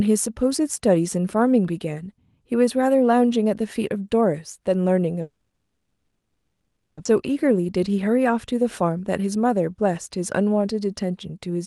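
At 5.21 s the speech stops and the last sound is stretched into a fading buzz that sinks into silence. The silence makes up about 1.2 s of the 1.76 s held until 6.99 s. This is a call audio freeze, most likely because packets were held up in transit and the jitter buffer ran empty. It differs from a dropout that loses material because the speech resumes exactly where it halted. Nothing is missing; a gap has been inserted, and it pushes everything after it about 1.76 s later.

Right after, between 7.05 and 7.07 s, comes a skip ahead. The delayed audio had piled up behind the stall, and roughly a second and a half of it was thrown away, so playback jumps straight to later speech. Unlike the freeze there is no gap or filler here. Two points in the speech that should lie well apart are spliced almost directly together, and the content in between is simply gone.

From 7.15 to 9.36 s a jitter buffer speed-up follows as the receiver works off the remaining backlog. 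It repeatedly trims pitch-period-sized slices, about 150 ms in total, so the speech runs at about 107% speed with its pitch unchanged and sounds slightly hurried. Unlike the skip, there is no single audible jump. The shortening is spread thinly across two seconds.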